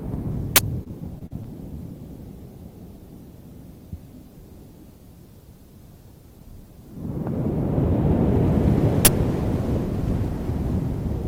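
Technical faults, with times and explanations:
0.56–0.58 s and 9.05–9.07 s: uninitialised buffer. A 20 ms block played before audio was written to it, so leftover memory comes out as a loud crack.
0.83–1.46 s: repeated packet loss (robotic sound). Repeated short dropouts, the longest 42 ms, are patched by extending the preceding sound. This concealment covers about 17% of the stretch and leaves the sound choppy.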